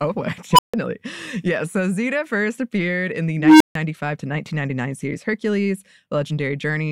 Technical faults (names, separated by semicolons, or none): unstable filter